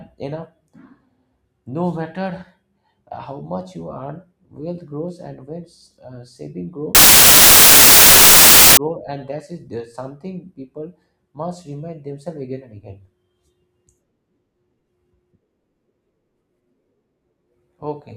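From 6.95 s to 8.77 s the speech turns into loud, harsh broadband noise. The samples are built from the wrong bytes: the reader misaligns or swaps each sample's bytes, so rapidly changing low-order bits become the dominant part of every value.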